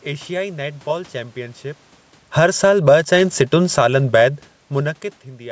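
A short speech clip with a gain control that can't settle, pumping down and up over a few seconds. Right after "नेट बॉलु चैंपीयन शिप", at about 2.22 s, there's automatic gain falling: the AGC decides the input is too hot and pulls the level down by about 8 dB over roughly 0.7 s, to 2.93 s. You hear the voice and the room noise sink together, which is the giveaway that it's the processing and not the talker. Overlapping that, from 2.56 s to 4.51 s, automatic gain rising lifts everything back up by about 3 dB, a slow swell of voice and background over nearly two seconds as the control chases a level it thinks is too quiet. Then a second fall cuts in between 3.53 s and 4.09 s, dropping about 5 dB, so the level sags again mid-swell. That back-and-forth is the AGC hunting. It's separate from the genuine level changes where the talker shifts at around 1.5 s and 4.5 s, which leave the background where it was.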